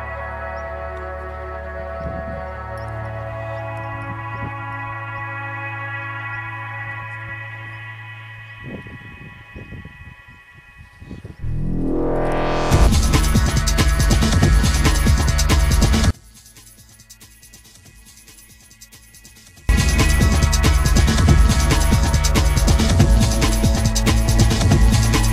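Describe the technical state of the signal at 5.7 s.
Nothing at 5.7 s points to a technical fault, and the signal comes through intact at that moment.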